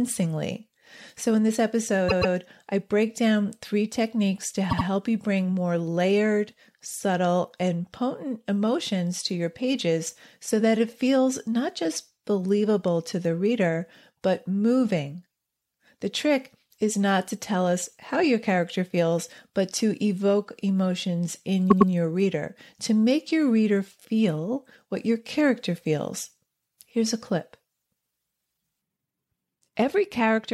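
Repeated frames at 2.08–2.34 s after "in this", 4.69–4.85 s after "down three techniques to", and 21.70–21.91 s after "to evoke emotions in". In each, a short block of the speech (130.6, 78.4 and 104.5 ms) plays two extra times, causing a stutter and stretching the audio.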